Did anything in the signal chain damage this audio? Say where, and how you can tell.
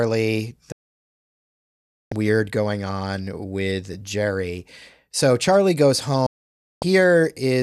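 Yes, there are digital broadcast dropouts at the reception and decoding stage. Frames stopped arriving intact, so the receiver muted. The speech fades out within about 3 ms at 0.72 s and returns at 2.12 s on "weird going on with". A second 0.55 s hole runs from 6.26 to 6.83 s. The material in both gaps is lost.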